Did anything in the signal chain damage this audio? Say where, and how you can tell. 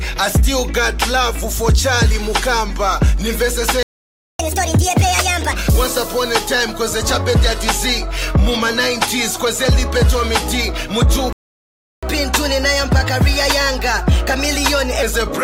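Yes. Playback stalls occur from 3.83 to 4.39 s and again from 11.33 to 12.03 s. The sound cuts out mid-flow into silence for about 0.57 s and then 0.70 s, and resumes without any fade or decay into the gap. That points to the playback stage: the player's output buffer emptied, most likely because data stopped arriving or its thread was blocked, and nothing was rendered until it recovered.

Catch-up at higher speed follows each stall. From 4.39 to 5.53 s the audio runs at 1.5 times normal speed, with pitch raised roughly seven semitones. From 12.03 to 15.03 s it runs at 1.15 times speed, about two semitones sharp, before dropping back. Because pitch and tempo rise together, this is plain resampling rather than time-stretching. The player is draining its backlog quickly to recover the time lost in the stall.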